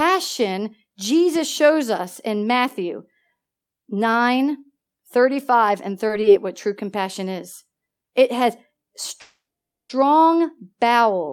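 Two brief hitches hit this speech clip around 6.07 s and again at 6.21 s, each a short stall from a late packet. A packet shows up behind schedule, the jitter buffer runs dry, and the receiver holds the last bit of sound for about 20 ms until it lands, then carries on right where it left off. Nothing's lost, but you get a tiny smeared hold with a faint buzzy dip, and everything after each one sits 20 ms later than before. The bigger one is a call audio freeze from 9.21 to 9.91 s. The sound hangs and stretches for about 680 ms, and roughly 480 ms of that is plain silence before the speech picks up again with nothing missing. The likely cause is packets getting held up somewhere along the network path long enough to drain the jitter buffer completely, so a real gap gets inserted and the rest of the clip runs 680 ms behind.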